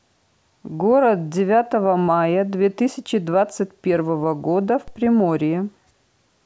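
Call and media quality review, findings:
DC step at 4.88 s. Low thump as the waveform's zero line jumps by about -27 dBFS. Speech continues unaffected. Offset then decays, consistent with a 5 Hz high-pass in the path draining it. Probable component: ADC recalibration or an input with standing offset switched in. Fix: null the offset at source or keep the input path fixed.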